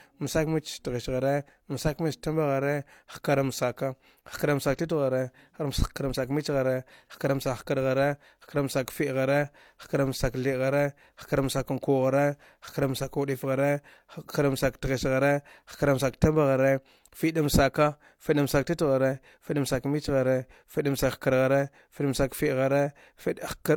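Transcoding between lossy codecs runs throughout the speech: nothing sounds above 18.5 kHz, and two layers of artefacts overlap. This likely comes from an MP3 encode near 96 kbit/s re-encoded as HE-AAC around 40 kbit/s, the second codec spending bits on the first codec's damage while adding its own.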